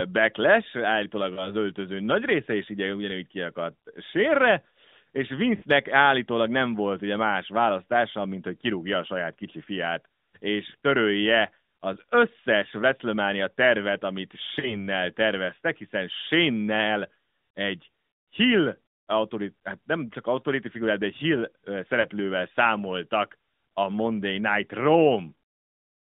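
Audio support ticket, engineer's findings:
Lost AMR speech frames at 1.34–1.50 s (before "öltöző nagy része is"), 5.56–5.64 s ("sérre és"…"állítólag nem volt ugye"), 14.60–14.86 s ("tervet amit"…"terveztek hiszen shane egy") and 22.02–22.07 s. Brief dips or drawn-out warbles where the AMR decoder repeats the last good pitch and vocal-tract settings at falling gain. The 5.56 s gap fits a run of about three 20 ms frames; the others fit single frames. On the waveform, the envelope sags and then recovers weakly. On the spectrogram, smeared, repeated harmonics fade within the AMR-NB line band of 200 Hz to 3.7 kHz.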